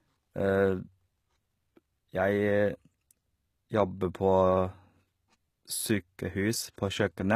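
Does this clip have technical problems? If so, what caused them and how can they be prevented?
Yes, there's HE-AAC compression damage running through the whole speech clip, and it's plainly audible. Nothing comes through above 14.9 kHz, and the treble that is there sounds synthetic: the likely cause is spectral band replication, where the codec copies lower bands upward and shapes them with only a rough envelope. The harmonics don't line up across that crossover, so s sounds come out gritty or lispy. The heavy damage fits a very low bitrate, around 20 kbps. To avoid it, encode at a higher bitrate with plain AAC-LC, or keep an uncompressed master.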